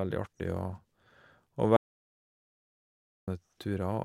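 Speech cuts out abruptly at 1.76 s and the track falls into dead silence, with no room tone or background hiss at all, until the sound returns mid-flow at 3.28 s. That is an audio dropout to silence lasting about 1.51 s, and whatever was said during it is gone. The likely cause is the input being lost, through a disconnected device, failed link or stray mute, while recording carried on writing silence.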